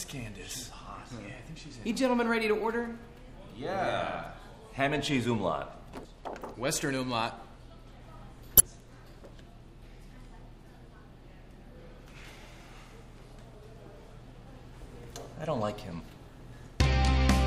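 Damaged data in the compressed stream corrupts short stretches at 8.57 to 8.60 s, 12.22 to 12.25 s, and 15.03 s. At each point the decoder misreads the faulty frames and loses sync until it finds the next valid header, producing a brief chirp, squawk, click or short hole in the sound.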